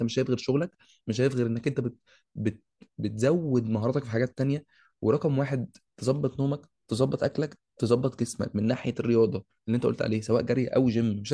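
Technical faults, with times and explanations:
No technical faults are heard in this speech recording. Nothing in the audio calls for a time or an explanation.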